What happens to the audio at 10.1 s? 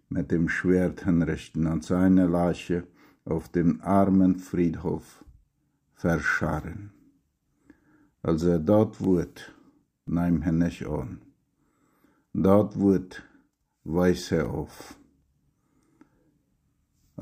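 At 10.1 s the audio is inside a run of CD scratch ticks spanning 9.04 to 10.33 s: six brief clicks, each a few milliseconds at most. A disc blemish defeats error correction once per rotation, so the player patches or mutes those samples repeatedly.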